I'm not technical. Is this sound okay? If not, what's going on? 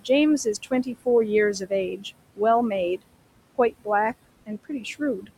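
No. Noise suppressor artifacts run through the whole clip. A cleanup filter keeps guessing which parts of the sound are steady background hum and turns those parts down, moment by moment. Here it pushes the room's background down hard, so the gaps between words sound unnaturally empty and the background rises again under the voice.

Speech cut by the noise suppressor happens between 0.63 and 1.07 seconds, 4.46 and 5.01 seconds, and 5.21 and 5.3 seconds. In those spots the filter mistakes bits of the voice for background and turns them down too. Only short slivers are hit each time, roughly a tenth of a second or a little more, so soft sounds and word endings there come out swallowed or faint.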